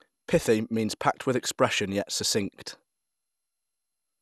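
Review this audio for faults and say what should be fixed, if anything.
Repeated lossy re-encoding, likely about five passes through an MP2-style codec near 128 kbit/s, caused generation loss throughout: swirly, hollow speech with blurred attacks, cut off above 12.6 kHz. To prevent it, keep a lossless master and encode to the lossy format only once, at the final step.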